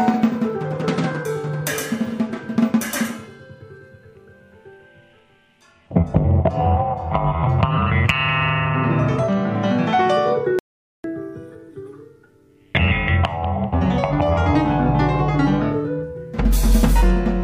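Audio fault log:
10.59–11.04 s, audio dropout to silence: the sound stops abruptly mid-flow and returns just as suddenly about 0.45 s later, with whatever occurred in that gap simply missing. Unlike a natural pause or a noise gate closing, the gap holds no room tone or hiss at all; it is dead digital silence. That points to the input likely having been lost briefly, through a momentary disconnect or mute, while recording carried on writing zeros.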